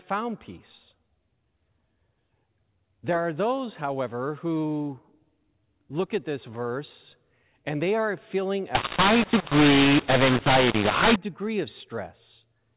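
From 8.75 to 11.16 s, after "they are feeling a" and before "degree of", mu-law and A-law are mixed up: A-law telephone samples decoded as mu-law scramble levels, roughening speech and filling pauses with noise, unlike plain clipping.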